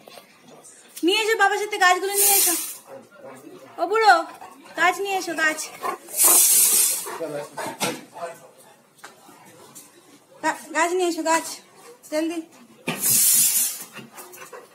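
Nothing stood out on listening to this audio.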